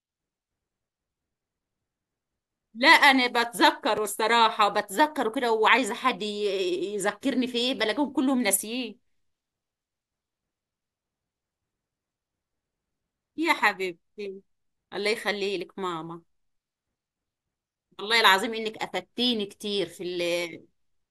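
A sharp tick at 3.97 s marks a block of digital silence in the speech: about 2.9 ms of samples dropped straight to silence, which fits a 128-sample buffer the program failed to fill in time, and the abrupt cut and return click together.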